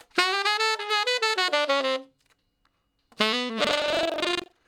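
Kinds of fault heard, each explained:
Buffer tearing: from 3.63 s on, a rattling buzz near 23.4 Hz, which fits a 2048-sample buffer, as roughly half of each buffer replays audio about a tenth of a second old; unlike dropouts it leaves no silent gaps and sounds only with signal.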